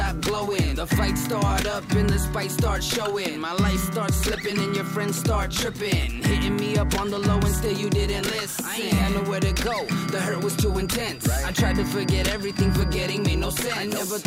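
A loudspeaker-to-microphone loop likely sat right at the edge of feedback from 9.39 s to the end, sustaining a feedback whistle: a thin, steady 4.8 kHz tone about 20 dB below the audio, swelling and fading slowly in level without ever running away.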